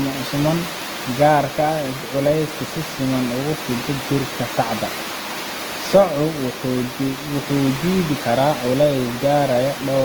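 Throughout the speech the sound has a rough, grainy texture with a noisy fizz where clean tonal detail should be, likely from Opus compression at a very low bitrate, near 16 kbps. The encoder appears to hold each band's energy and fill starved bands with folded or noise-like content, so the full bandwidth survives, with content up to about 20.1 kHz. Unlike MP3 damage, there is little swirling or hollow watery texture.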